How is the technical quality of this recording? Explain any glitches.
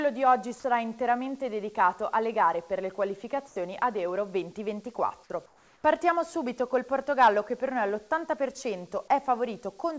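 Two short gaps where the real background drops out: at 3.48 to 3.56 s and 5.46 to 5.84 s, steady featureless noise about 6 dB quieter takes over, likely comfort noise filling a discontinuous-transmission pause. The call path also leaves nothing above 8 kHz.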